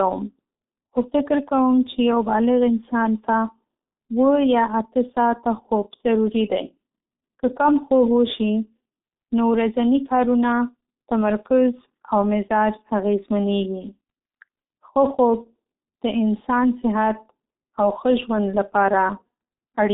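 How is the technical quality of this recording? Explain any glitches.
The quality is poor throughout. The speech has passed through a G.723.1 codec, and its damage is heavy.

The G.723.1 codec affects the whole clip. Nothing reaches above 3.8 kHz. The line band runs from 250 Hz to 3.7 kHz. Coarse 30 ms frames and a slowly updated voice model, which fits a rate near 6 kbit/s, leave the speech muffled and hoarse with smeared consonants.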